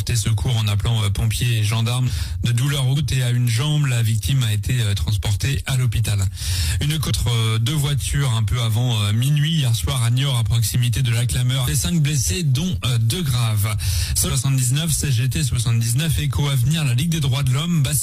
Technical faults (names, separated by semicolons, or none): damaged data in a compressed stream